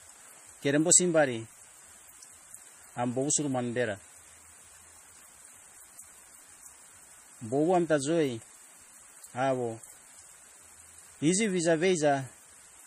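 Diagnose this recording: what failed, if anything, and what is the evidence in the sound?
Throughout the speech there is a watery, swirling texture, with sibilants turning metallic and nothing above 15.2 kHz. The stage is the codec, likely MP3 compression at a low rate that fits about 40 kbps, starving weak frequency lines so they flicker between frames.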